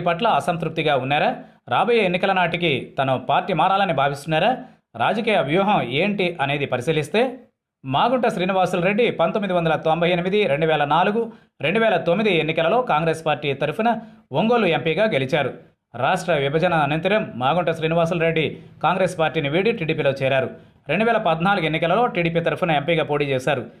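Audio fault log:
No audible faults detected.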